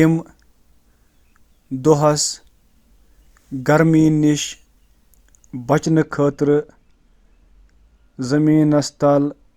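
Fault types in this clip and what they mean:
De-emphasis applied wrongly: a treble-cutting filter acts on audio that needed no correction, tilting the response down about 10 dB at 10 kHz, so the speech turns dull and muffled from 5.84 s onward.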